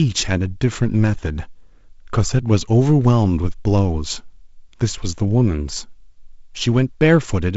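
No technical faults can be heard in this speech.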